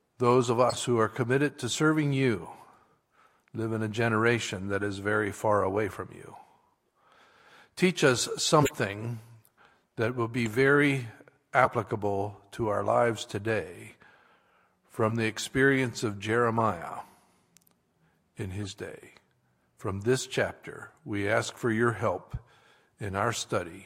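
Corrupt frames get decoded at 0.69–0.78, 4.81–4.84, 8.61–8.71, 10.46, 11.64–11.72, 15.08–15.12, 16.57–16.60 and 18.61–18.73 s. Damaged bits throw energy into the wrong frequencies, giving short chirps and noise blips, loudest around 8.6 and 11.6 s.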